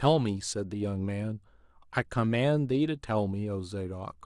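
Speech recording, no technical faults detected.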